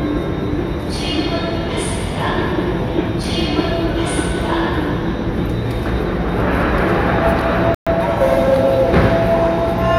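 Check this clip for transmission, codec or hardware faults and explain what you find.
One fault is present, a playback stall. From 7.75 to 7.87 s the sound cuts out abruptly for 120 ms, then resumes, likely because the player ran short of data or its thread was briefly blocked.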